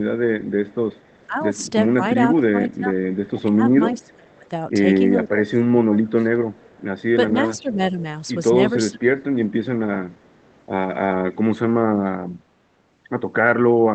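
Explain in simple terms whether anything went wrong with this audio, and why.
A faint second copy of the speech trails behind the first at 0.44 to 1.27 s, 3.93 to 4.49 s, 6.52 to 7.76 s and 10.13 to 10.65 s. It arrives almost half a second late, and it's quiet: barely there at the start and near 10 s, clearest around 4 s. This is an echo leak. The likely cause is that the other person was on a loudspeaker and their echo canceller didn't fully remove your own sound before sending it back.

Between 1.27 and 6.38 s, the speech repeatedly sinks in level and loses clarity, with roughly three seconds of it turned down, some parts quite sharply. It happens again more mildly and briefly between 7.33 and 9.0 s. This is speech suppressed in double talk. Both sides were likely talking at the same time, so the echo canceller couldn't tell the real talker from the returning echo and lowered everything together.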